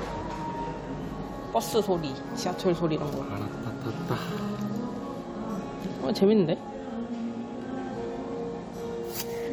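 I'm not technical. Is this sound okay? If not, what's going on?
Yes, this sound is okay, and there's nothing going on with it that needs fixing.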